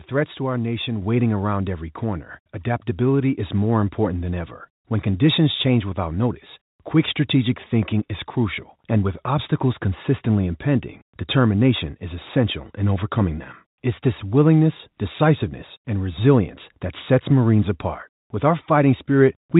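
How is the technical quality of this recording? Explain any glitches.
There is one glitch: a microphone volume step-up at 1.02 s, between "threats to our nation" and "waiting around every corner". The call software judged the input too quiet and raised the device's gain in a single jump of about 5 dB. Voice and background noise become louder together and stay at the new level. The audio is limited to telephone bandwidth, consistent with G.711 coding, and nothing is heard above 4 kHz.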